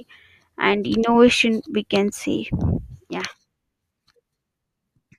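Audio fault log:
Nothing stood out on listening to this speech recording.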